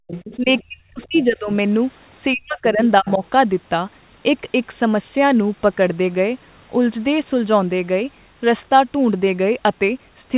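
Background gated by the echo canceller, 0.00 to 0.07 s: the room sound drops by about 36 dB for a split second at the very start. The canceller has clamped the microphone hard while the loudspeaker plays, and the ambience snaps back once it releases.

The other side's voice leaking through appears from 0.07 to 0.63 s, about 15 dB below the talker, then more faintly from 1.02 to 1.25 s and 3.07 to 3.27 s, both about 25 dB down. These are scraps of a second voice, likely loudspeaker playback the echo canceller failed to remove from the microphone.

Speech suppressed in double talk runs from 0.36 to 1.5 s and from 2.34 to 3.24 s. The talker's level collapses by roughly 35 dB and then 40 dB, in patches. This is likely the canceller, unable to separate near speech from echo while both sides talk, pulling everything down together.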